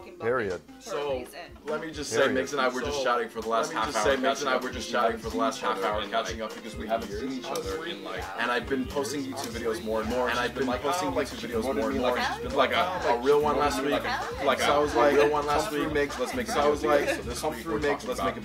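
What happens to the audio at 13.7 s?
A second copy of the audio is likely being captured through a slower path, producing a doubled audio track that runs throughout: at 13.7 s an equally loud, dry, full-band duplicate trails about two seconds behind.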